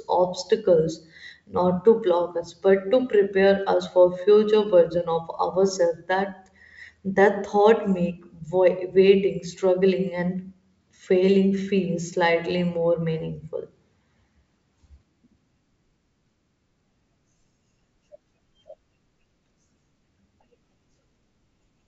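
No faults can be heard in this speech recording.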